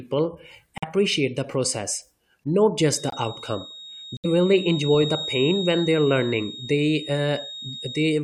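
At 0.78 s, just before "the process not", a corrupt frame muted drops out: the decoder rejected damaged compressed frames and the player substituted silence, leaving a flat-line gap on the waveform until 0.84 s. From 2.88 s, right after "the process not", a feedback whistle at 3.7 kHz sits roughly 15 dB under the speech through to the end. It shows on a spectrogram as a thin horizontal line and is likely a loudspeaker-to-microphone loop hovering at the edge of feedback. Further muted-frame holes follow at 3.09–3.14 s and 4.17–4.26 s, each a sharp-edged vertical blank across the spectrogram.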